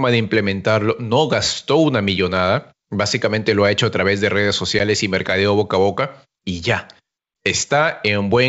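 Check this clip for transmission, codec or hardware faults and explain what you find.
One transmission fault is audible: packet loss on an ADPCM call at 4.79 s, between "a través de redes" and "y mercadeo boca". The speech drops into a hard-edged silent gap of about 10 ms, consistent with a single lost packet, and comes back slightly distorted before settling. The gap was filled with silence, and the ADPCM decoder's adaptive predictor and step size drifted out of step with the sender's, so the first samples after the hole were reconstructed wrongly until the two resynchronised. The surrounding audio, carried by G.722 wideband coding at 64 kbit/s, stays clear into the upper band.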